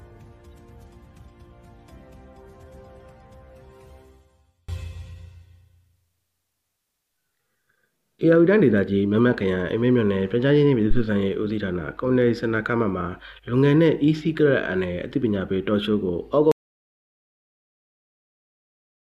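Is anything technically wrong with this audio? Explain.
Yes, there are three faults.

From 0.0 to 4.7 s, one channel is inverted. The centre nearly vanishes, dropping about 39 dB in mono. One stereo channel likely has reversed polarity, so shared content cancels.

At 10.91 to 11.04 s there is a phantom power thump. A supply switched on or off on a live input, and the step passed through the coupling capacitors. It is heard as a deep thump that decays in about 31 ms.

From 16.52 s to the end, there is an audio dropout to silence. The sound cuts out into total silence with no room tone. The input was likely lost while silence kept being written.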